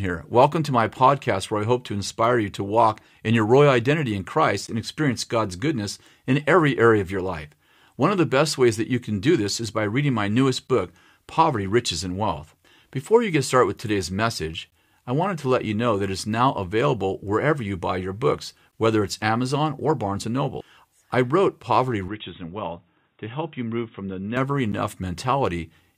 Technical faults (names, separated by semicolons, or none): gap between stream segments; input switched to a poorer device